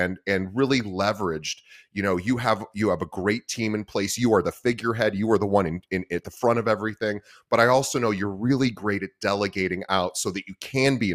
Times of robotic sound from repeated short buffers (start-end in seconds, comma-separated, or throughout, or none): none